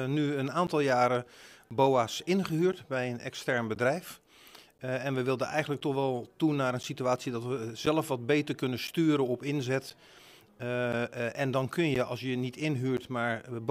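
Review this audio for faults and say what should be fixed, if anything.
Periodic USB or driver dropouts: the bus or audio driver stalls every 1.024 s from 0.67 to 12.98 s, leaving roughly 10 ms gaps of silence heard as regular ticks. Prevent this by disabling the interfering background task, using a larger audio buffer, or moving the interface to a dedicated USB controller.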